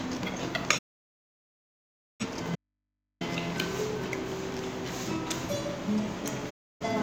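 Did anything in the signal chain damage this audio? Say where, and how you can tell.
Yes. The sound fades out over about 20 ms into full silence from 0.77 to 2.25 s and again from 6.49 to 6.86 s. This is a digital broadcast dropout: the receiver muted on lost or corrupt frames, roughly thirty for the longer gap.

From 2.56 to 3.21 s the sound cuts abruptly to faint mains hum far below its level. This is an audio dropout to a faint residue, likely from a broken analogue connection leaving an open input live.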